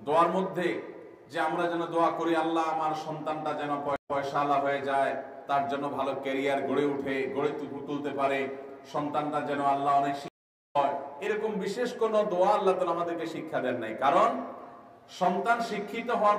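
At 3.96 s the sound drops out for 130 ms, a stream reconnect. It resumes 104 ms earlier, repeating a moment. At 10.28 s a second reconnect silences 465 ms and jumps about half a second ahead. Each time, a fresh decoder restarted mid-stream.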